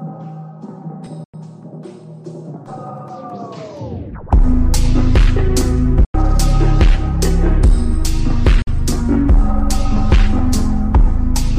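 The audio cuts to silence three times, at 1.24 to 1.34 s, 6.04 to 6.15 s and 8.62 to 8.68 s. The gaps last about 93, 93 and 46 ms and have abrupt edges or a fade of a few milliseconds. The sound then resumes further along. These are likely Bluetooth dropouts, where lost packets go unplayed.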